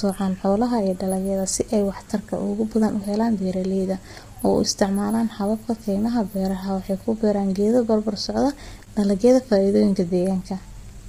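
Throughout, the speech is rough and grainy, with noise between harmonics and a lowered or synthetic top band. This is likely heavy low-delay AAC compression, whose coarse coding at low bitrates fills the gaps between harmonics with noise, fitting about 24 kbps.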